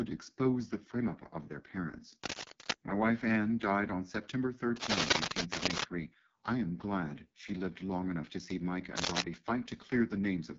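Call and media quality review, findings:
AMR wideband (HD Voice) codec, throughout: rough, raspy speech, band stops near 7.3 kHz; the heavy damage fits the 6.6 kbit/s mode. Constant rasp, unlike the intermittent scratch bursts.

Cable scratch noise at 2.23–2.73 s after "up of their parents", at 4.76–5.86 s before "I am glad she", and at 8.97–9.22 s. Dense, uneven rustling bursts, from roughly speech level to well above it. Likely a worn cable or connector being moved. Irregular, unlike steady hiss or clicks.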